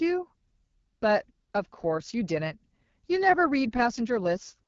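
From start to finish the speech sounds rough and raspy, with a hiss-like upper band that stops dead at about 7.4 kHz. That is the AMR wideband (HD Voice) codec at one of its lowest modes, which fits 8.85 kbit/s. With so few bits, the pulse-driven model of the vocal tract captures the voice coarsely below 6.4 kHz, and the region above is filled with shaped noise rather than real detail.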